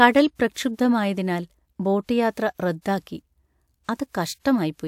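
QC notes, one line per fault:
0.52 to 3.99 s, pre-echo: a short hiss of about 35 to 42 ms leads attacks at 0.52, 2.81, 3.85 and 3.96 s. Block quantisation noise is smeared ahead of each sharp onset, softening it.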